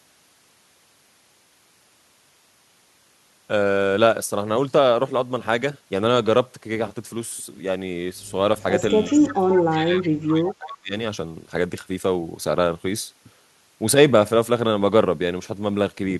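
At 9.04 s there's an echo leak. A faint copy of the speech comes back 349 ms late, about 20 dB under the original, likely because one end's echo canceller let some of its loudspeaker pickup through. It returns briefly at 9.53 to 9.60 s, a bit stronger at about 15 dB down, and again at 9.99 to 10.07 s.

Overlapping that, from 9.11 to 10.94 s, the speech is suppressed in double talk. It dips in chunks, by up to about 25 dB at the deepest, for around a second and a half in total. That's likely the canceller failing to separate the local talker from the echo during the overlap and turning both down.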